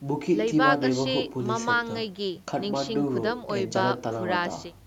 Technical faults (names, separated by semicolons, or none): none